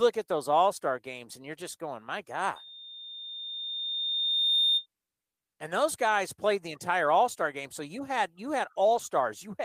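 At 2.55 s a loudspeaker feedback squeal begins. A single tone near 3.6 kHz swells steadily over roughly two seconds. It ends up a few decibels louder than the speech. The microphone is hearing the loudspeaker it feeds. At that frequency the loop returns more than it receives, so the tone keeps feeding itself. It is a thin, piercing whistle. It stops at 4.86 s.

Just after "so you had you", at 8.85 s, a lost packet is rebuilt from error correction. For about 80 ms, until 8.99 s, the speech turns rough and grainy. There is no gap or dropout. The decoder filled the missing stretch with low-bitrate backup copies carried in the following packets. The length fits four separate lost packets. The sound is continuous but briefly coarser than its surroundings.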